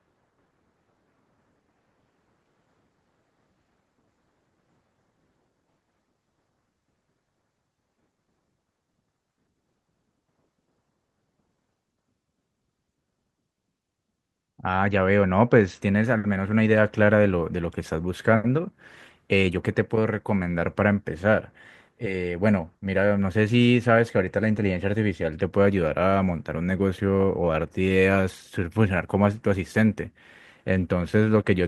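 Listening to the recording closely, nothing stood out as a technical fault at any point.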